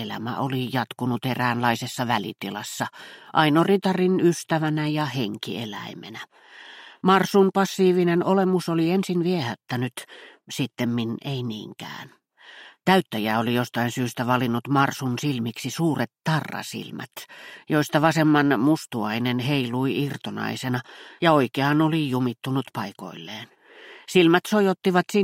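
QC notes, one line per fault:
0.13–25.22 s, clock slip clicks: a soft, regular rattle of ticks roughly every 30 ms, several hundred in all, loudest on strong sustained or high content and gone in silence. The rate points to two unsynchronised clocks drifting apart by around 700 ppm, likely dropping or repeating a single sample at each slip. On a spectrogram, faint evenly spaced vertical broadband lines; on the waveform, tiny one-sample discontinuities at steady intervals.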